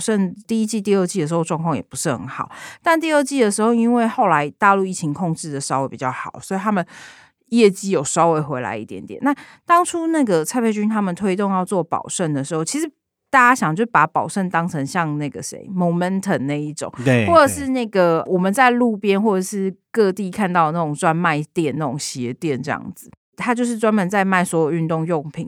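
A clock-matching stage likely made a drift correction step, dropping the playback rate in one jump to rebalance its buffer. From 6.02 to 8.22 s the speech runs about 5.6% slow and drops a full semitone, sounding sluggish and detuned before snapping back to normal speed and pitch. The same shift returns more briefly from 22.00 to 22.72 s, with the same slowing and semitone drop, then an abrupt return.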